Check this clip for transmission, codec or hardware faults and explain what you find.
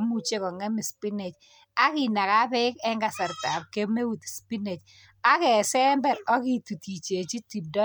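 Nothing to report on this one, as there's no fault to be heard anywhere in the speech.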